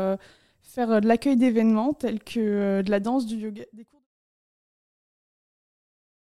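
No faults heard; the level eases out in a smooth fade from around 2.5 s to 4.07 s, with no click or hard edge at the end.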